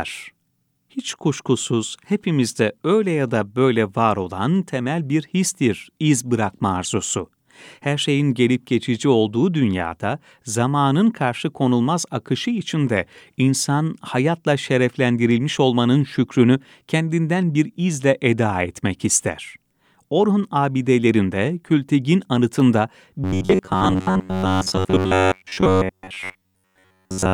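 From 23.24 s to 27.33 s, the speech takes on robotic sound from repeated short buffers: the voice collapses into a rigid, metallic buzz near 93.8 Hz that only loosely tracks the words. The likely cause is audio arriving too seldom, so playback loops a segment of about 10.7 ms, the period of that buzz, while fresh audio is skipped. Roughly 70 percent of the passage is repeated material, which imposes the fixed pitch.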